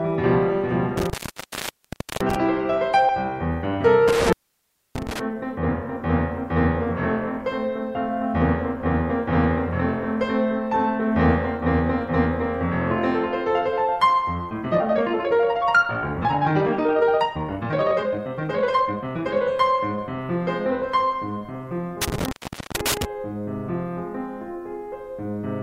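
Between 0.97 and 2.36 s the music drops out for about 1.07 s, crackling at each edge with faint hiss in the gap. This is an intermittent contact, a loose cable or plug briefly opening the line. The same thing happens from 4.08 to 5.19 s, with a gap of about 0.63 s. From 14.49 to 19.43 s the music turns rushed, running 1.73 times faster while its pitch stays put. This time-stretched section is likely software squeezing the passage by dropping short slices. A final intermittent contact, from 22.02 to 23.05 s, cuts the music for about 0.44 s, with crackle at both ends.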